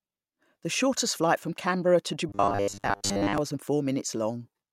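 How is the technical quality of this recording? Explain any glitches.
The recording has one glitch. From 2.29 to 3.38 s, robotic sound from repeated short buffers: audio likely arrived too seldom, so roughly 10 ms snippets were replayed for most of that stretch, forcing a rigid, metallic 100 Hz buzz over the speech.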